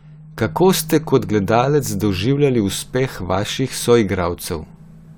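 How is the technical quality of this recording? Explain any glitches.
Listening closely to the recording, nothing stood out as a technical problem that would need explaining.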